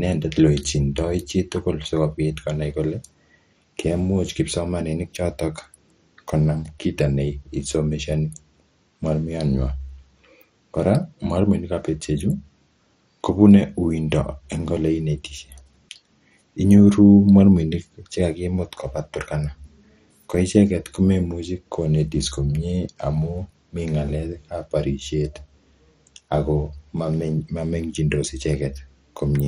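Speech with heavy MP2 compression throughout: dull and gurgling, with granular distortion and upper bands flickering on and off, nothing above 15.7 kHz. This is likely a Layer II encode at a low bitrate, around 56 kbps, and the band-wise flicker separates it from MP3's swirling or a plain low-pass filter.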